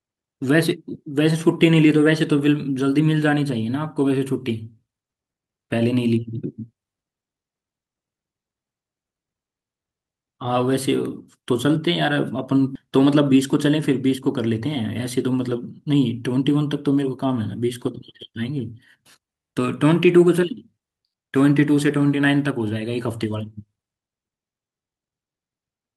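A skip ahead at 12.75 to 12.77 s in this speech recording drops about a second of audio with no fill. The receiver discarded that stretch, likely as its jitter buffer overflowed while later audio waited, so the speech on either side of the jump is joined almost directly. A jitter buffer speed-up follows from 12.85 to 15.84 s. The receiver trimmed short pitch-period pieces again and again to shed excess buffered delay, removing around a fifth of a second in total, so the speech runs at about 107% speed with unchanged pitch and sounds hurried.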